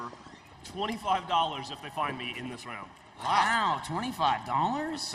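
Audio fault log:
throughout, filter restarted on every block: a regular buzz at 23.4 Hz, which fits a filter processing 2048-sample blocks and starting each one from silence, so every block opens with a small transient. Unlike mains hum, this buzz is a train of ticks rather than a steady tone, and it rises and falls with the signal's level. Unlike random dropout clicks, the ticks keep strict, evenly spaced timing.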